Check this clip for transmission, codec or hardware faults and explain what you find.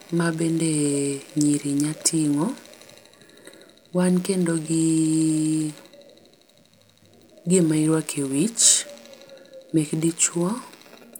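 No faults turn up anywhere in this speech recording. There is nothing here that calls for further explanation.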